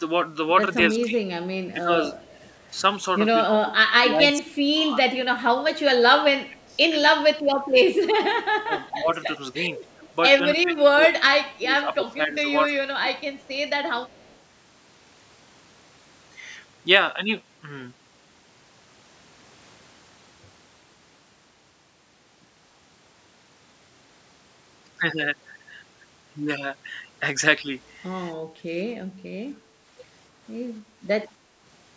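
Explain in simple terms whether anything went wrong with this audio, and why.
Yes, a few things went wrong, all from the way a call cancels echo.

Speech suppressed in double talk: from 0.94 to 2.12 s, 3.46 to 9.54 s and 10.52 to 13.11 s, the voice dips, thins and drops in pieces, likely because both sides talked at once and the echo canceller turned everything down.

Echo leak: a faint repeat of the voice trails about 0.27 s behind at 2.22 to 2.52 s, 6.63 to 6.76 s, 9.85 to 11.58 s and 13.18 to 14.38 s, likely loudspeaker sound the echo canceller missed and sent back.

Background gated by the echo canceller: at 28.49 to 28.63 s the room sound briefly dips, then returns, as the canceller clamps the microphone while the loudspeaker plays.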